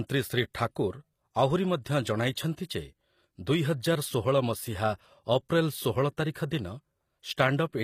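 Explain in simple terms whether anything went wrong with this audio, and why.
The speech is damaged throughout, from start to finish. The treble is synthetic, s sounds come out gritty and lispy, and nothing is present above 15.5 kHz. This is likely HE-AAC compression, which rebuilds the high end by copying lower bands upward.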